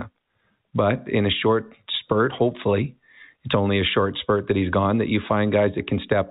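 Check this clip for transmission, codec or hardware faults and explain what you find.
No faults can be heard in this speech, which has gone through G.711 telephone coding: the band stops at 4 kHz, as a mu-law telephone path at 64 kbps would leave it, and at most a faint quantisation noise rides along with the signal level.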